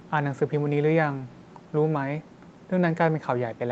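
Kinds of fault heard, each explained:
Nothing stood out on listening; the top end stops at 8 kHz, as expected from the call path this audio passed through.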